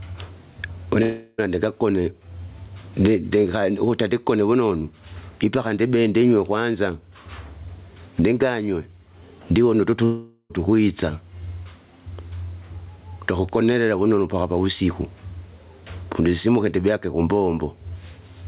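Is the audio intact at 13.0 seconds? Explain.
No. At 13.0 seconds, as throughout the clip, there is gain pumping, likely from input gain set far too high with a fast limiter reining it in. The level swings by around 25 dB, squashing the speech.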